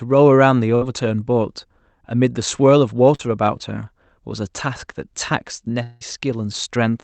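A speech recording with three network-related gaps. From 0.75 to 0.83 s, a burst of packet loss removes about 60 ms, and the receiver stretches the preceding sound into a brief fading buzz or hiss before speech jumps ahead. At 3.15 to 3.21 s, short concealed packet loss drops about 40 ms; the synthesized fill leaves a quick smear where the real audio should be. From 5.83 to 6.03 s, a likely long network dropout of about 180 ms is heard as the last sound carried on and fading across the whole gap, without ever reaching silence, before speech resumes further along with that stretch missing.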